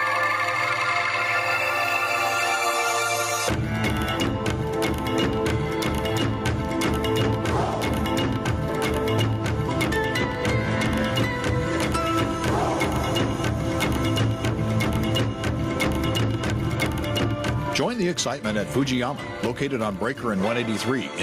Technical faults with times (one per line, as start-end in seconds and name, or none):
0.00-21.23 gain pumping